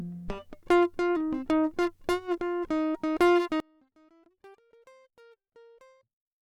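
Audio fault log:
3.60–6.41 s, one channel inverted: the music collapses by about 35 dB to a faint residue until the end, likely because one stereo channel's polarity is reversed, cancelling shared content when summed to mono. The waveform shrinks to a sliver and the spectrogram fades abruptly.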